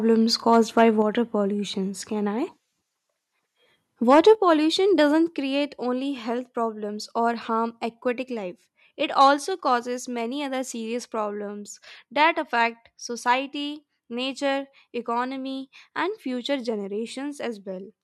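Speech with two recurring faults. Microphone overload occurs from 0.52 to 0.84 s, 4.09 to 4.31 s and 9.2 to 9.28 s, just before "causes many other serious". The loudest syllables take on a harsh, crackly edge. The likely cause is input gain set so high that peaks ran about 2 to 4 dB past the converter's ceiling. On a waveform the tops appear sliced flat, with a few percent of samples pinned at the converter's limit in the worst burst. A spectrogram shows smeared vertical streaks of added high-frequency energy. The microphone volume is also stepped down at 1.02 s, 4.35 s, 5.37 s (between "pollution doesn't" and "only health problems or") and 9.45 s, by about 4, 6, 4 and 2 dB respectively. Three of the drops follow soon after a distorted stretch, so the call software was likely cutting the device gain in reaction to the overload. Voice and background fall together, which shows as an abrupt step in the waveform envelope and a sudden uniform dimming across the spectrogram.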